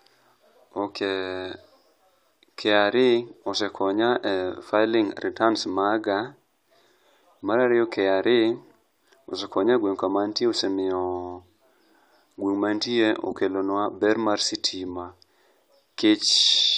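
Nothing in this recording stands out as a technical fault, so there's nothing to walk through moment by moment.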